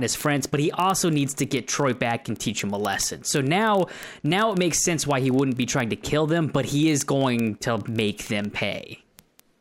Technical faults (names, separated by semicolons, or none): word clock ticks